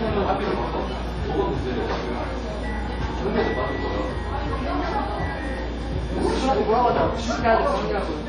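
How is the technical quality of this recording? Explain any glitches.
The technical quality is poor, with heavy codec damage across the whole recording. From start to finish the sound rings and smears, with a hiss that swells and fades alongside the signal, and there is no content above 12.4 kHz. This points to likely WMA compression at a low bitrate, which fits around 32 kbps. The transform coder spreads quantisation noise over tens of milliseconds and discards weak components. On a spectrogram this shows as a hard ceiling at 12.4 kHz, patchy holes where detail was zeroed, and smeared noise around transients.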